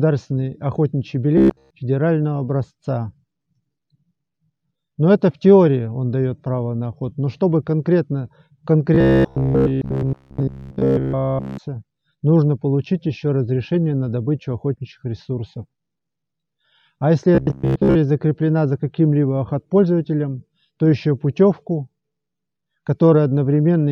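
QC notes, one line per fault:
1.38–1.71 s, 8.95–11.58 s and 17.35–17.97 s: robotic sound from repeated short buffers. A rigid, metallic buzz at 66.7 Hz replaces the sound, following the original only loosely. In the first two spans it takes over almost entirely, and in the third it covers most of the span. The likely cause is audio arriving too seldom, so playback keeps looping a fragment of about 15 ms while fresh audio is skipped, and that loop rate becomes the buzz.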